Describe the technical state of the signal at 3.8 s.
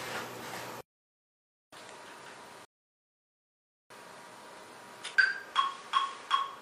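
At 3.8 s the signal is silent, inside a rebuffering stall running from 2.65 to 3.90 s. The player exhausted its downloaded audio and halted until more data arrived, then resumes exactly where it stopped, losing nothing but inserting about 1.25 s of extra time.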